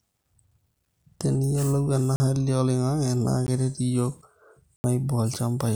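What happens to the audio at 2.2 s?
The speech drops into a block of digital silence from 2.16 to 2.20 s, a 40 ms run of silence likely where the output buffer was not filled in time. The cut in and out has no fade, leaving a short hole.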